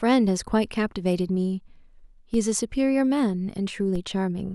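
At 2.34 s and again at 3.96 s, a DC step of about -25 dBFS shifts the zero line, heard as a low thump, then drains away through a 5 Hz high-pass.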